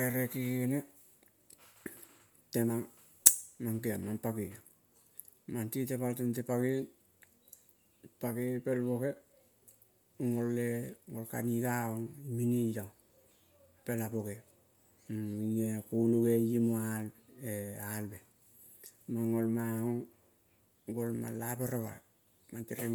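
Likely Bluetooth LC3 compression throughout, fitting 10 ms frames at 48 kbps: noise-filled highs give the speech a plainly grainy, breathy edge, with nothing above 20.2 kHz.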